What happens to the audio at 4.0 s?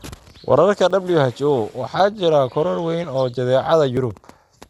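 A dropped buffer (overrun) hits at 3.97 s, just before the moment asked about. The sound jumps forward. No gap of silence is left. Roughly ten milliseconds of audio is missing, and the two sides are joined edge to edge. The likely cause is an overrun: the software fell behind, and the hardware overwrote that block before it was read. The skip is brief and takes only a sliver of the speech.

MP2 compression also colours this moment, as it does the whole clip. The speech sounds dull. The codec damage is plainly audible as a gurgling, granular roughness. Likely cause: MPEG Layer II coding at a low bitrate, which fits about 80 kbps. Too few bits are shared across its 32 sub-bands. The upper bands get switched off, and the remaining ones are coarsely quantised.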